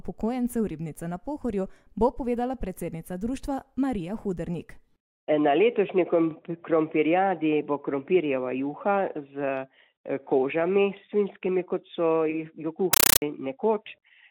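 From 12.93 s to 13.22 s, a compressed stream played as audio: a Dolby Digital bitstream, consistent with AC-3 at 448 kbps, reached the output undecoded. Its frames become 9.33 ms noise bursts repeating at 31.25 Hz, heard as loud, chattering static replacing the sound.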